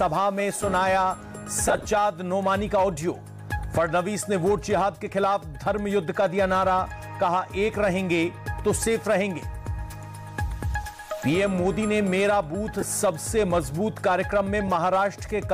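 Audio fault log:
1.68–1.85 s: lost LE Audio frames. Short dropouts are scattered across about 165 ms and remove nearly 100 ms in total. The longest gap is roughly 30 ms. The LC3 decoder fills each gap by repeating the last spectrum with scrambled signs, so tonal parts turn into a brief noisy smear.
12.81–12.83 s: lost LE Audio frames. A 15 ms gap is concealed the same way and gives a grainy blip.
14.68 s: lost LE Audio frames. A single 7.5 ms gap leaves a brief smeared tick.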